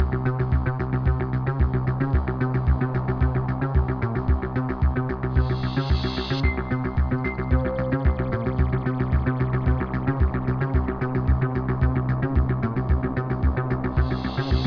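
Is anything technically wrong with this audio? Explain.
No, nothing is technically wrong with this audio.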